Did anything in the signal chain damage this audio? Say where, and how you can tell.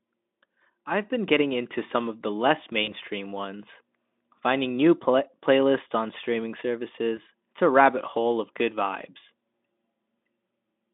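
Yes, it's the network: VoIP packet loss concealed by the speech codec at 2.83–2.92 s and 7.15–7.19 s. Roughly 40 ms and 20 ms went missing, and the Speex decoder smeared its last frame into a fading buzz or coloured noise.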